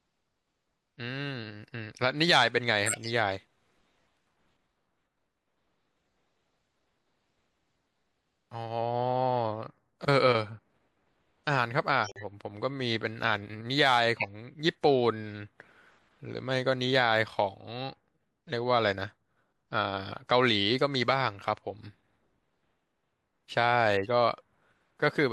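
Speech with two kinds of codec damage. Corrupt frames decoded appear at 2.86–3.08 s, 14.17–14.27 s and 23.95–24.07 s as short chirpy bursts, loudest first and faintest last, from damaged frames played with misread gains and codes. A corrupt frame muted at 12.04–12.24 s is an abrupt silent hole, about four frame lengths, where the decoder rejected damaged frames and the player filled silence. It differs from the others because energy disappears rather than sprays into wrong frequencies.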